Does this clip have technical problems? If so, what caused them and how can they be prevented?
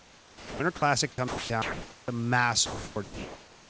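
Yes. There are three kinds of problem, all tied to the sender's voice detector on what sounds like a call path with a top end that stops at 8 kHz.

Sound dropped by the voice detector: from the start to about 0.6 s, from 1.28 to 1.5 s, and from 2.66 to 2.96 s, the speech gives way to a steady, flat noise before picking up again. The likely cause is the detector treating the speech as background and stopping transmission, so the receiver filled in with comfort noise. That cost roughly 210, 150 and 160 ms of real speech. Lowering the detector's sensitivity threshold, or lengthening its hangover time, would keep that speech flowing.

Onset clipped by the voice detector: at 1.16 s and again at 2.05 s, speech starts abruptly, with no soft lead-in. About 20 ms and 30 ms of the beginning are missing and filled with noise. This was likely the detector reacting late when speech resumed, so those first moments never got sent. 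A faster-attack detector, or one that keeps a short lookahead buffer and sends the audio just before the trigger, would preserve those onsets.

Comfort noise in place of the background: from 1.62 to 2.08 s, and from 3.04 s to the end, the room background is swapped for smooth, featureless synthetic noise. The real room noise sits about 26 dB under the speech. The substitute matches its level in the first gap and is about 2 dB quieter in the second, but the texture of the real room is gone. This is likely discontinuous transmission kicking in during the pauses. Disabling DTX, or sending the real background at a low bitrate, would keep it natural.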